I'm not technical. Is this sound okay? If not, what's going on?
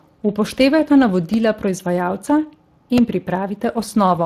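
No. Throughout the clip the speech sounds rough and hoarse, with a grainy, processed quality that is easy to hear. That is damage from the Speex codec, an older speech-compression method used in internet calls and game chat. It squeezes the voice into a small amount of data by keeping a rough model of it and throwing away detail, and that lost detail is what makes it sound coarse.

There are also two tiny glitches: a brief click at about 1.34 s and a slightly longer buzzy tick at about 2.98 s. Each is a repeated buffer. The playback device ran out of fresh audio for a moment and replayed the last very short piece it had: once at 1.34 s, three more times at 2.98 s. Because that piece is so short, the repeats come out as a click or buzz rather than an audible stutter.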